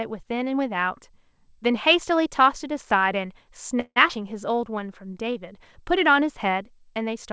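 At 3.80 to 3.99 s the sound holds and then stops: about 161 ms of filler, a continuation of the last sound fading to roughly 60 ms of silence. This is a call audio freeze, likely from packets arriving late and the jitter buffer running dry. Nothing is lost afterwards, which distinguishes it from a dropout.

From 4.08 to 4.12 s comes a skip ahead, the reverse case. Around 70 ms of audio is dropped and the two sides are joined almost directly, with only a tiny gap. Only about 9 ms is filled, so the sound jumps forward abruptly.

Between 4.51 and 5.40 s a jitter buffer slow-down repeats single pitch periods to rebuild the buffer, adding 85 ms and playing at 91% speed. Sounds are drawn out but the pitch stays the same. The extra time is spread across the stretch rather than inserted as one pause.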